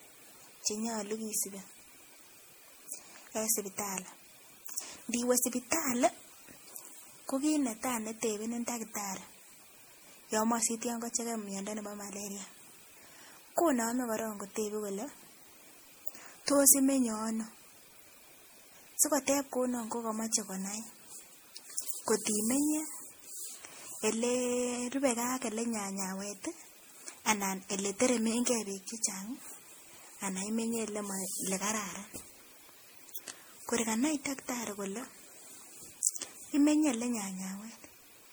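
The speech has most likely been through repeated lossy encoding, decoded and re-encoded about five times with a codec whose character fits MP3 at around 64 kbit/s. That is generation loss. Each pass quantises again on a shifted frame grid, so the errors stack instead of cancelling. Throughout the clip, the speech sounds swirly and hollow, with smeared high frequencies and spectral gaps, and consonant attacks are blurred beyond what that bitrate alone would cause.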